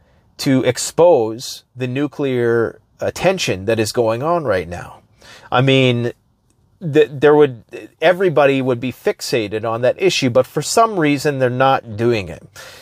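Nothing stood out on listening; no technical problem could be heard anywhere in the audio.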